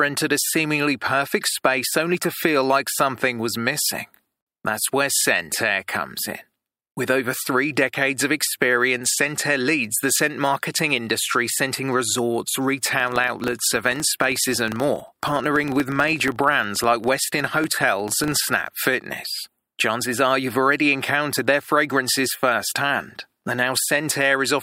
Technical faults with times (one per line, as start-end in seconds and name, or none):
12.92-18.78 filter restarted on every block